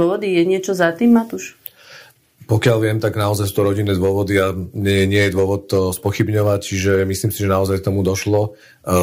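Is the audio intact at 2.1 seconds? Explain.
Yes, at 2.1 seconds the speech plays through cleanly, with no dropout, click, distortion or other fault to be heard at that moment.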